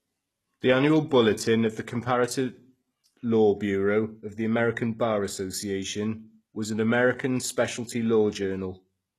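Speech, with plainly audible HE-AAC compression damage running throughout. The treble is synthetic, and s sounds come out gritty and metallic. Nothing is present above 12.3 kHz. The likely cause is spectral band replication rebuilding the upper band from copied lower bands, consistent with a very low bitrate near 16 kbps.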